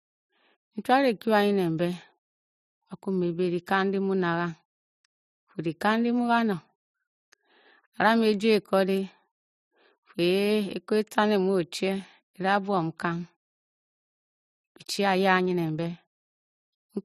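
From 14.26 s to 16.00 s the speech goes through a time-compressed catch-up: after a stall, the player trims its backlog by removing short segments and cross-fading the joins, running about 1.15 times normal speed. Pitch stays put, but delivery sounds rushed.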